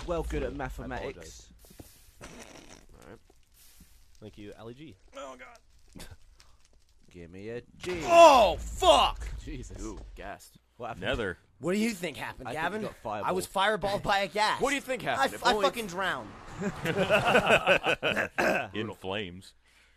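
No technical faults can be heard anywhere in the clip; the signal stays steady and intact throughout.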